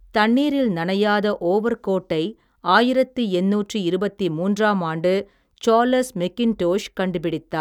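No technical faults can be heard anywhere in the speech.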